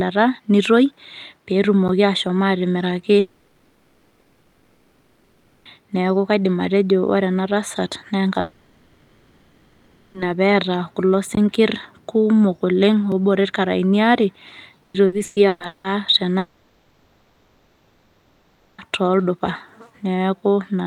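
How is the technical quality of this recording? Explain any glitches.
Technically it's rough. The speech keeps getting interrupted by dropouts, ticks and one choppy stretch.

At 1.88 s, 11.35 s and 13.12 s there are blocks of digital silence, about 10, 20 and 2 ms long. The sound cuts straight out and back, so each one is a tick or tiny hole.

There are long network dropouts at 3.19–5.79 s, 8.40–10.17 s and 16.38–18.81 s. The receiver smears the last sound across the whole gap, never going silent, so you lose about 2.5, 1.7 and 2.4 s of real audio. The cause is likely lost network data.

From 14.82 to 15.87 s there's repeated packet loss, with robotic sound. Five gaps (the longest is 180 ms) get patched, covering over half that second, so it sounds choppy.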